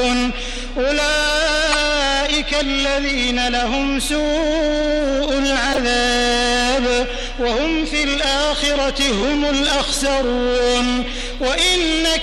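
Corrupt frames decoded at 1.71–1.75 s, 5.72–5.78 s and 7.45–7.50 s: damaged compressed data, a few frames each time, was played anyway, giving brief misplaced-frequency chirps, squeaks, blips or bursts of noise, the first two loud, the last softer.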